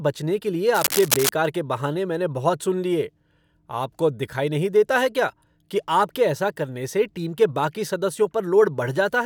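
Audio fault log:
0.73–1.30 s, cable scratch noise: dense, uneven rustling bursts at about the speech's level, likely a worn cable or connector shifting contact, unlike steady hiss or single clicks.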